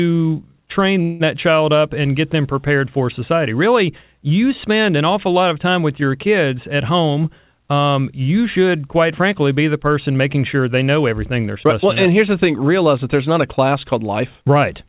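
At 1.02 s the incoming packets were likely held up on the way, so the jitter buffer ran dry and the receiver had to invent sound until they arrived. This is a call audio freeze: for about 0.18 s the last bit of speech is stretched into a short fading buzz or hiss, and then the speech resumes from exactly where it stopped, just before "child up and get". Nothing is lost; a gap has simply been inserted, pushing everything after it later.

From 13.72 s to 14.88 s, just after "that there's not a", the jitter buffer was holding more audio than it wanted, and the receiver worked that backlog off with a jitter buffer speed-up. It repeatedly cut out tiny slices of a pitch period or so, removing roughly a twentieth of a second in total. The speech plays at about 104% of its normal speed with unchanged pitch. It is band-limited at 4 kHz by the G.711 A-law call path.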